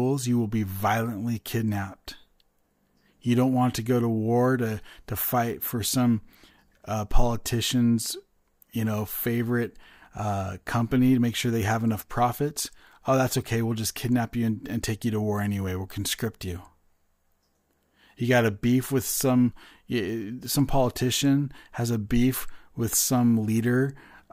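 Nothing in the recording stood out as a technical problem on listening.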